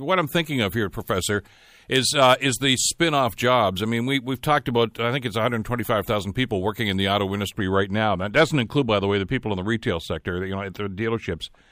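Pre-emphasis was left on from 0 to 7.57 s: the 50 µs FM treble boost was never undone, so the speech sounds thin, bright and sibilant until "right now".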